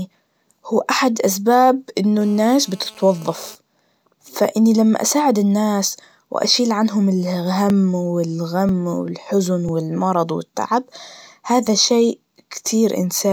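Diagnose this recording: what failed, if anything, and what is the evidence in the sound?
A GSM phone buzz, entering at the analogue wiring stage, sits over the speech from 2.21 to 3.55 s, starting right after "هو أحد أسباب إنه". It is a hard, raspy buzz at 216.7 Hz with a dense stack of harmonics, steady across its span, about 28 dB below the speech. A nearby 2G handset on a call transmits in bursts at that rate, and an unshielded input or cable rectifies the radio pulses into the audio path.

Periodic USB or driver dropouts appear at the driver or buffer stage between 7.7 and 12.66 s. There are about seven ticks spaced 0.996 s apart, each where a few milliseconds of audio simply vanish and the waveform jumps straight to later material rather than into silence. The strict one-second spacing points to a background task that blocks the USB bus or audio driver on a fixed schedule, so the stream skips a chunk each time.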